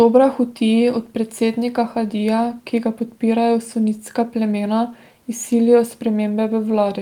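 Nothing stood out on listening to this speech recording.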